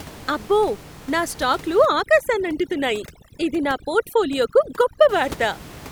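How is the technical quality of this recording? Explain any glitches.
The recording has one clear fault, with room noise sitting about 19 dB below the speech before it. From 1.86 to 5.09 s, overdone noise removal cuts near-noise bands, leaving a background that drops and breaks up into twinkling specks, and a spectrogram that turns dark and speckled.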